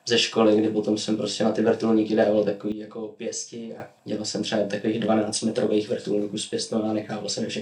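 At 2.72 s the level drops abruptly by about 12 dB and stays down until 3.8 s: a sudden gain jump, likely from a gain setting applied without a ramp. Unlike a fade or compressor pumping, the change is instantaneous, and the background noise steps down together with the sound.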